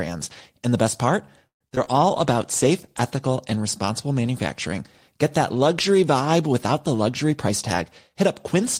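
Between 1.47 and 1.89 s the speech breaks up with repeated packet loss, giving a robotic sound. There are four gaps in about 0.4 s, the longest lasting 131 ms. About 192 ms is filled by extending the preceding sound, and another 60 ms is simply missing, so nearly half the span is concealed. Because the receiver keeps stretching the last good audio across each hole, the speech turns choppy, with fragments dropped.

From 2.10 to 4.09 s a call bitrate drop sets in. The coarser coding points to the encoder being pushed from roughly 32 kbps down to about 18 kbps after the bandwidth estimate fell, with the lowest rate held for 1.16 s. With fewer bits, the codec quantises more roughly and trims high-frequency content. The voice loses crispness and takes on a rough, muffled, watery quality until the rate climbs back.

From 6.94 to 8.62 s there is a jitter buffer speed-up. The receiver was holding more audio than its target, so it removed short pitch-period segments repeatedly to reduce delay, cutting out about a tenth of a second in total. 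Playback runs at about 106% speed while the pitch stays the same, and the speech sounds slightly hurried and compressed in time through this stretch.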